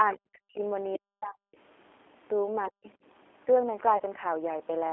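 A speech clip carried throughout by the G.729 codec, with a rough, slightly synthetic texture that fits an 8 kbit/s stream. On a spectrogram, energy is confined to a narrow telephone band of roughly 300 Hz to 3.5 kHz, with nothing above and a smeared, pulse-like fine structure. From 3.97 to 4.02 s, VoIP packet loss concealed by the speech codec replaces about 30 ms of lost audio with a stretched continuation of the preceding sound that fades. The waveform shows a stretch decaying in amplitude, and weak, distorted frames as the decoder recovers.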